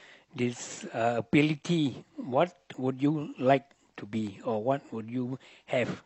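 Overlap between stream segments at 2.74–2.78 s: overlapping timestamps on 1-second segments make the player trim about 35 ms of speech, leaving a jump heard as a tiny skip.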